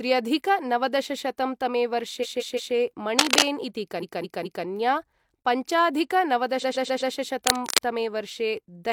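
The clip is speech with two kinds of fault. Repeated frames cause three stutters. From 2.20 to 2.71 s, a 170.7 ms stretch plays three extra times. From 3.99 to 4.63 s, a 213.3 ms stretch repeats three more times. From 6.59 to 7.10 s, a 128 ms stretch comes back four more times. Each stutter adds about half a second or more. The cause is a block of compressed frames being written or sent again, so the decoder replays it. Cable scratch noise appears twice, from 3.18 to 3.43 s and from 7.47 to 7.81 s. It is a dense, uneven rustle. The first burst sits a little above the speech, and the second is about as loud as the speech. The likely cause is a worn cable or connector being moved, which makes its contact resistance jump rapidly.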